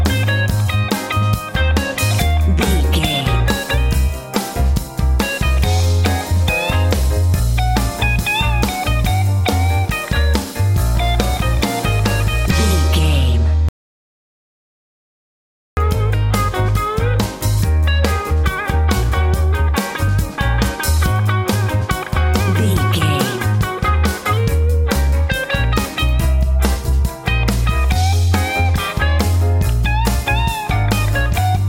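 At 13.69 s the sound cuts out mid-flow into dead digital silence, with no room tone at all, and only comes back at 15.77 s, so roughly 2.1 s of material is simply gone. That's an audio dropout to silence: the input was likely lost for a moment, say a loose connection, a failed link or a stray mute, while the recorder kept writing silence straight through the gap.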